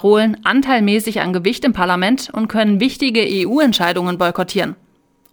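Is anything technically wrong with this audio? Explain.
Yes. From 3.29 s to the end of the clip, there is sample clock jitter. The converter's clock wanders, so each sample is taken slightly early or late at random, on the order of 7 microseconds. The error this creates grows with the slope of the waveform. Here it sits roughly 25 dB below the signal. It sounds like a hiss or roughness that rises with loud and high-frequency sound and vanishes in silence.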